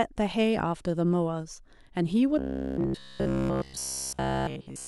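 Speech clip that goes robotic from 2.39 s to the end: essentially all of it buzzes near 66.7 Hz, likely repeated 15 ms buffers standing in for missing audio.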